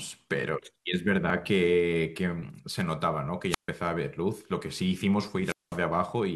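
Speech with a tiny skip at 1.3 s, where an overlap between stream segments made the player trim a few milliseconds at a boundary that fits 2-second segments. At 3.49–3.69 s and again at 5.41–5.81 s, hiss swells, the sound drops into a near-silent hole of about 140 ms and then about 200 ms, and returns. These are wireless microphone squelch dropouts: the FM signal faded until the receiver's squelch muted its output.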